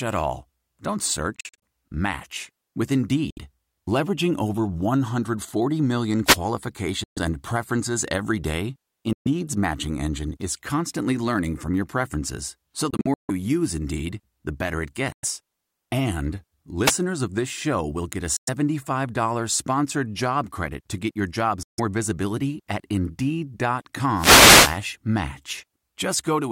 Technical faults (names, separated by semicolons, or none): Bluetooth dropout; wireless microphone noise hit